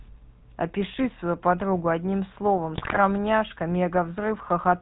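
From start to finish the speech has passed through the GSM full-rate codec, whose pulse-driven vocal-tract model keeps only a thinned excitation and discards everything above 4 kHz, consistent with a 13 kbps encoding. The result is a plainly audible buzzy, gravelly roughness and a muffled top end.

From 2.76 to 2.99 s, GSM bit errors corrupt the decoder's filter, pitch and gain values across a run of frames, pointing to a badly degraded radio link. The speech briefly breaks into squawks, pops and gargling, with sudden lurches in level and spectral shape.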